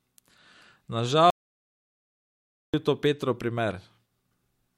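An audio dropout to silence runs from 1.30 to 2.74 s in this speech clip, about 1.43 s of dead silence with no room tone, likely from the input being lost while recording continued.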